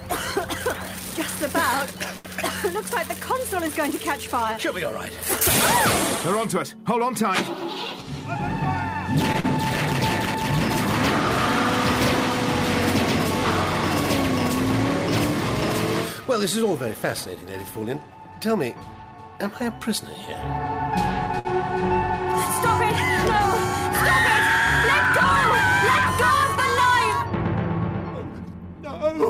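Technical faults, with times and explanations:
2.17–2.28 s, 9.32–9.37 s and 21.39–21.53 s: short stall from a late packet. Each time a packet arrived late and the jitter buffer ran dry. The receiver stretched the last sound for 72 ms, 16 ms and 59 ms. Then it resumed at the same point. Nothing is lost, but the sound hangs briefly.
9.40–9.47 s: short concealed packet loss. About 60 ms of audio never arrived in time. The receiver continued the previous sound for 36 ms and blended back in. This is heard as a brief smear, and the delay dropped by roughly 20 ms.
16.63–17.43 s and 28.30–28.60 s: jitter buffer speed-up. The buffer held more audio than its target. The receiver trimmed small pitch-period slices repeatedly, running at 107% and then 111%. Roughly 70 ms and 40 ms were removed. The sound briefly hurries without changing pitch.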